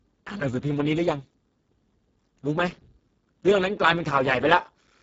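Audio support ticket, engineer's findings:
Speech hoarse, noisy throughout; nothing above 7.7 kHz. Speex codec at heavy damage, fits a roughly 6 kbps setting: too few bits for excitation, upper band mere noise-like fill.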